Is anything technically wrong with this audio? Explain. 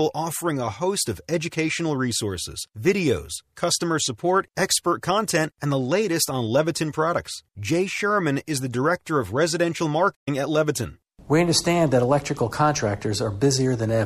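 Yes, there is one playback stall in this speech, from 10.14 to 10.28 s. The sound cuts out for about 120 ms and then resumes, likely because the player ran out of buffered data or its thread was blocked. The waveform drops to a flat line, and the spectrogram shows a clean vertical gap.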